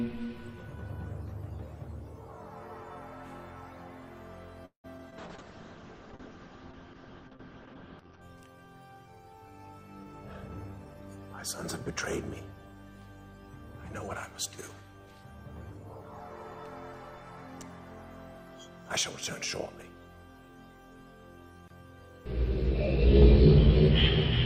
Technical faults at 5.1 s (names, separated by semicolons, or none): short concealed packet loss; call bitrate drop